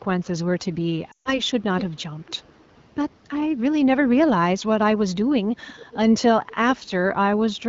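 Around 1.12 to 1.41 s there's a run of lost AMR speech frames. About 140 ms of audio never made it through intact, which fits roughly seven 20 ms frames failing their checks. The decoder patches the gap by replaying the last good pitch and vocal tract settings while ramping the gain down. You hear the sound drop to near silence within two frames, as it does on a wideband link. When real frames resume it sounds briefly thin and rough before settling.

After that come three bits of echo leak, each a copy of the audio trailing it by 401 ms. The likely cause is a far end on speakerphone whose echo canceller let some of its own microphone pickup slip back to us. The first, at 1.79 to 1.84 s, is the loudest, roughly 10 dB under the main audio. The second, at 5.67 to 5.98 s, is fainter, around 20 dB down. The last, at 6.48 to 6.55 s, is quieter still, a short ghostly scrap.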